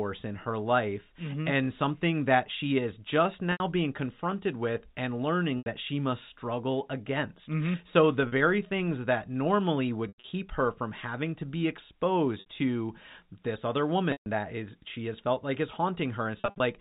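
Short buzzy held tones, the longer ones fading toward silence, interrupt the speech at 3.52, 5.58 (after "being confronted with and"), 8.28, 10.08 to 10.32 (after "things that normally"), 12.4 (before "to this other"), 14.12 and 16.4 to 16.6 s. This is packet loss with pitch repetition: the receiver loops the last pitch period to cover gaps of 40 to 160 ms.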